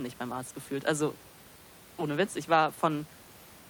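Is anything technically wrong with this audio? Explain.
No, nothing stood out on listening to this speech clip, and the faint room noise, about 22 dB below the speech, is simply part of the recording space rather than a problem with the system.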